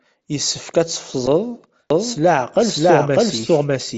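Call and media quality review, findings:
Concealed Bluetooth headset packet loss at 1.26 s (one lost frame, 7.5 ms) and 3.42 s (two frames, 15 ms). Receiver repeats a recent waveform stretch, so the single loss is barely audible. Waveform shows a short repeated cycle. Spectrogram shows a harmonic smear.

Doubled audio track from 1.90 s to end. Full-band copy about 0.7 s behind, roughly equal level, dry with no room colour, starting abruptly. Likely a second, slower capture path or an edit misalignment. Spectrogram shows every speech pattern repeated later. Waveform shows overlapping envelopes.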